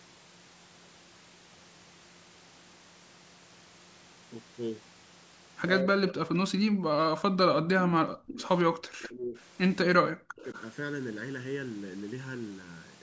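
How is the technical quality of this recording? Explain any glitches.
The recording has two call-processing faults that sound like a speakerphone conversation with overlapping talk.

Speech suppressed in double talk occurs at 5.83–8.4 s, 8.65–9.36 s and 9.85–10.46 s. The speech dips by up to about 40 dB, likely because an echo canceller ducked it while both sides talked.

Echo leak occurs at 6.08–6.12 s, 8.42–8.49 s and 10.43–10.62 s. Faint copies of the speech appear 214 ms late, about 20 to 30 dB down, likely residual loudspeaker echo. The consistent delay distinguishes them from reverberation.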